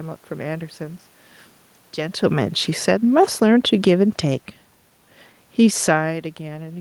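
From 2.79 s to 4.56 s you can hear automatic gain falling: the gain control decides the input is too loud, or its background noise too strong, and eases its gain down, ending up about 4 dB lower. It's a gradual slide, not a step, and the room noise sinks right along with the voice, which is the giveaway that it's the gain stage moving. The level shifts around 2 s and again near 6 s come from the talker moving relative to the mic.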